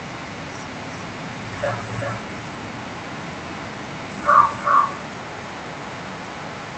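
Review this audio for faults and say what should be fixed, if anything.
There's an echo with no canceller running through the whole speech clip. Each phrase comes back roughly 0.4 s later, only about 6 dB down, so it's a pretty obvious thin shadow trailing the talker. That's the far end playing the call out of a loudspeaker, its mic catching it, and nothing subtracting it before it's sent back over the network. The band-limited call-codec sound comes through under it. To prevent it, enable acoustic echo cancellation on the far-end device or have that person use a headset.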